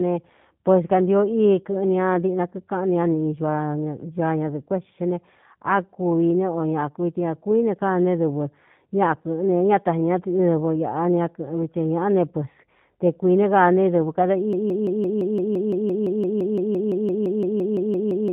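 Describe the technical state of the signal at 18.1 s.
At 18.1 s you're deep inside a broken-record loop that kicks in at 14.53 s, right after "kaa ne dɨvɨ kada", and runs to the end of the clip. A 170 ms fragment repeats back to back about 22 times, most likely because the stream stalled and kept resending its last chunk. The speech that should have followed is simply gone.

On top of that, the whole clip carries G.729 codec damage at 8 kbit/s. The speech is rebuilt from a vocal tract model plus a handful of pulses per frame, so it sounds plainly rough and a bit synthetic. Nothing gets through above 3.8 kHz, which leaves the sound dull.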